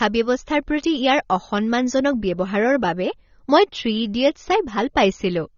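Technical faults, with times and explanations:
Throughout, AAC compression: the speech is dull and smeared, with nothing above 6.9 kHz and a plainly audible warbling, fizzy texture on sibilants and held sounds. This is likely a low-bitrate AAC-LC encode, and the damage fits roughly 24 kbps. With so few bits per frame, the encoder lowered its cut-off and quantised the remaining frequency lines coarsely, leaving gaps in the spectrum that shift from frame to frame and produce the swirling artefacts.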